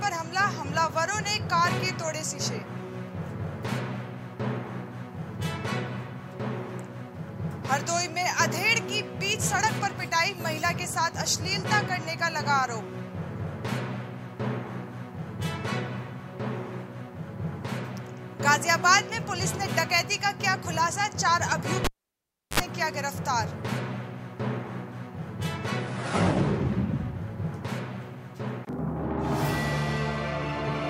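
At 21.84 s a cable pulled and plugged in: a pop, about 0.70 s of near silence, a 62 ms burst of 50 Hz mains buzz, then a pop at 22.60 s.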